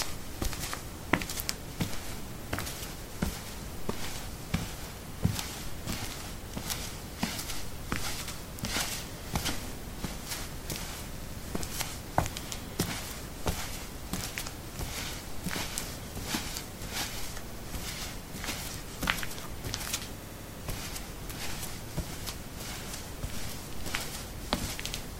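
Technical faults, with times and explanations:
8.28, 11.18, 17.49, 20.22 and 24.92 s, repeated buffer: the same 85 ms piece of sound plays again with a hard join, once extra at 8.28 and 24.92 s, twice at 11.18 and 17.49 s, four times at 20.22 s, heard as a stutter. This points to a 4096-sample buffer. Unlike a dropout, no gap opens and no sound is skipped.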